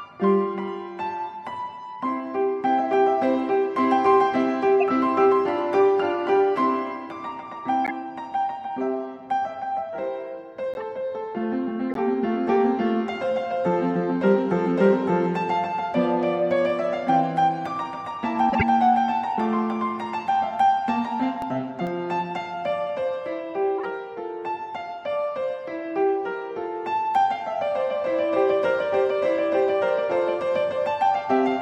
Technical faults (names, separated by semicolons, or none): corrupt frame decoded; CD scratch ticks